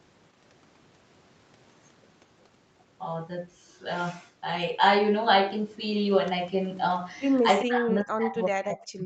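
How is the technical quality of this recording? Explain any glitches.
There's one real glitch, right at the end, and the audio tops out around 8 kHz, as you'd expect from a wideband call codec. From 7.64 s to the end, the speech gets pushed way down, roughly 40 dB at its deepest. That's most likely speech suppressed in double talk: both ends talked at once, the echo canceller couldn't separate this talker from the loudspeaker echo, and it ducked both.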